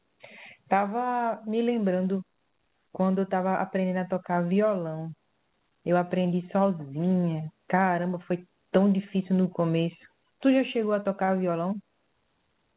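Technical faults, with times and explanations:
11.24–11.29 s, short concealed packet loss: a brief smear where 40 ms of audio arrived too late, so the decoder extended the previous sound to bridge it.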